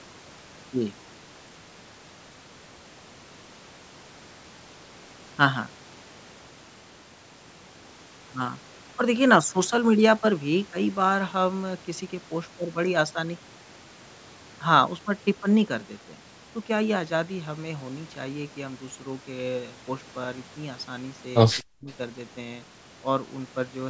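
At 21.69 s the speech drops sharply, sinking by roughly 40 dB and nearly vanishing for about a fifth of a second before returning at 21.88 s. This is speech suppressed in double talk, and the likely cause is the call's echo canceller mistaking this talker for loudspeaker echo while the far side was speaking, then turning both down together. The band limit near 8 kHz comes from the call microphone processing and is not part of this fault.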